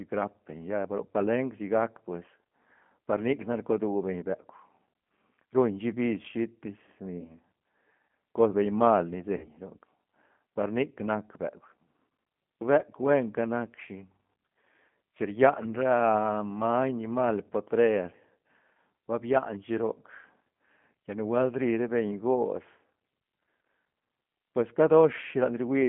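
Throughout, the speech carries G.729 codec damage that is plainly audible: a slightly rough, synthetic texture from frame-based filter-and-pulse reconstruction, consistent with the 8 kbit/s G.729A variant, with the line band confined to roughly 150 Hz to 3.4 kHz and nothing above 4 kHz.

VoIP packet loss concealed by the speech codec occurs three times. From 2.96 to 2.98 s, just before "par nic nac", a brief stretched, fading smear fits one lost 20 ms packet. From 7.21 to 7.35 s, after "shi bis shitis ni", a 20 ms gap leaves a longer weak, distorted stretch as the decoder recovers. From 9.37 to 9.48 s, after "cos beñ mal ni", about 60 ms are extrapolated from the last pitch and filter into a fading sound, which points to three consecutive packets lost.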